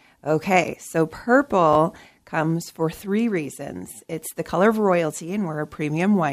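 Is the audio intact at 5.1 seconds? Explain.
Yes, the speech at 5.1 seconds plays through intact, with no dropout, click, distortion or other audible fault at that moment.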